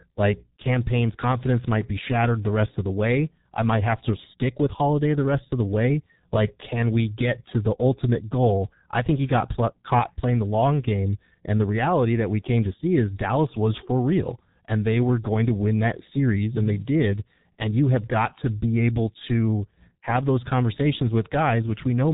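From start to finish the speech carries G.723.1 codec damage, and it is heavy. Everything above 4 kHz is gone, so the sound is muffled, and the coarse, slowly updated voice model leaves a hoarse, grainy texture with smeared consonants, which fits a rate near 6 kbit/s. A plain low-pass filter would dull the top end but leave the voice smooth. Here the roughness and blurred consonant onsets reveal a low-rate speech coder working in 30 ms frames.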